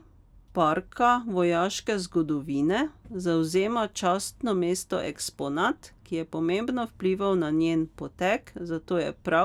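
Nothing goes wrong anywhere in this stretch of speech, so there's no fault to point to at any moment.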